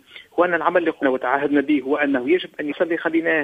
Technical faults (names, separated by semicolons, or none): damaged data in a compressed stream